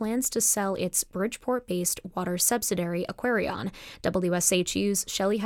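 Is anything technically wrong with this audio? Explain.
Yes. From 3.53 to 4.62 s, after "based water subsidiary", channel delay (comb filtering): one channel lags by roughly one sample, and the mono sum cancels near 20 kHz, dulling the top.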